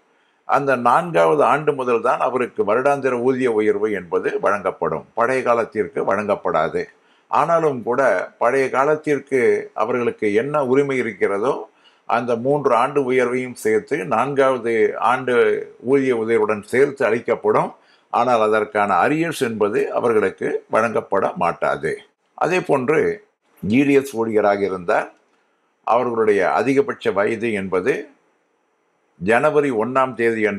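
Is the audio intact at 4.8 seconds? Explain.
Yes, at 4.8 seconds the audio plays through intact, with no dropout, click, distortion or other fault.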